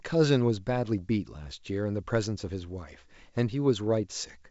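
No technical faults are audible.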